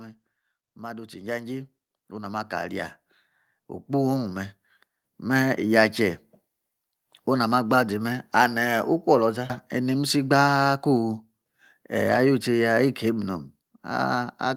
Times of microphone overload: none

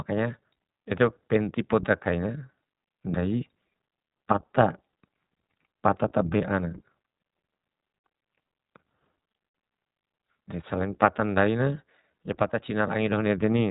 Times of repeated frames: none

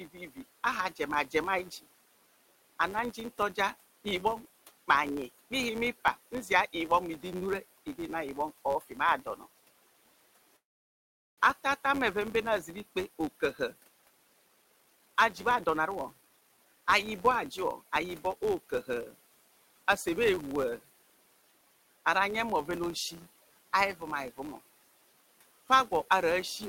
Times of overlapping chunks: none

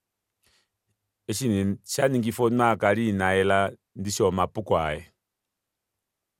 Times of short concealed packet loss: none

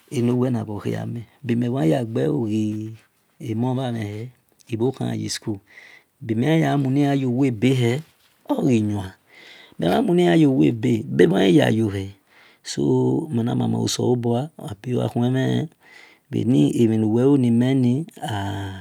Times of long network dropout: none

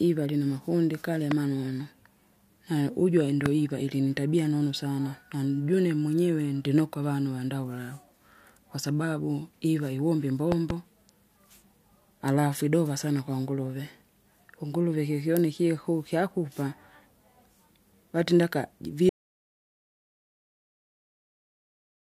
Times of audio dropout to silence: 19.09-22.18

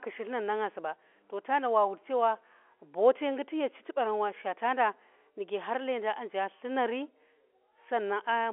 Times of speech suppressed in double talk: none

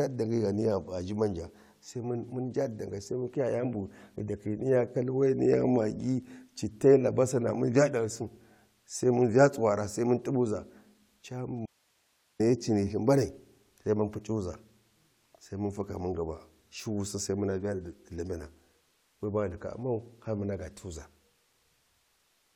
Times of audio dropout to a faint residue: 11.66-12.40

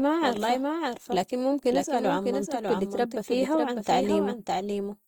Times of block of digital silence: none

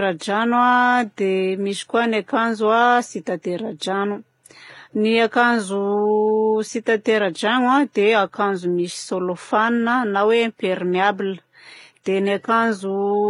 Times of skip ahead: none

